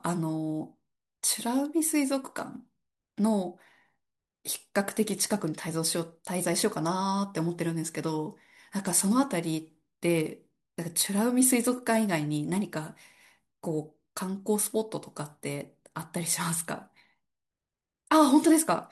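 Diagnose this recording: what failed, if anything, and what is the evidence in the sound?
Nothing in the signal chain failed: the speech recording holds steady level and continuous timing across its whole duration, with no break, distortion or disturbance at any stage from capture to playback.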